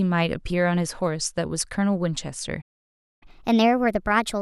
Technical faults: playback stall; catch-up at higher speed

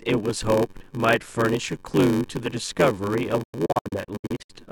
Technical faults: block size mismatch (padded); digital broadcast dropout

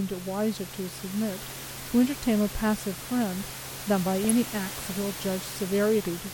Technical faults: DAB burbling

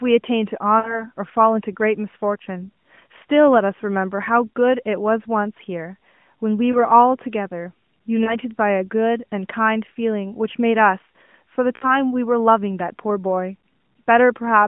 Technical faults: lost AMR speech frames

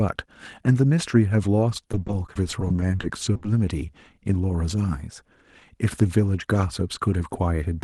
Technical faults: repeated packet loss (robotic sound)

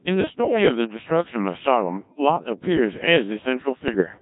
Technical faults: Codec 2 vocoder; bit errors on digital voice radio

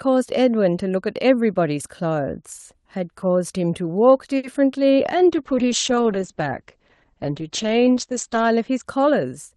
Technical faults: short stall from a late packet; short concealed packet loss; call bitrate drop

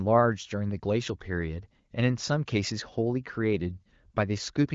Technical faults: none

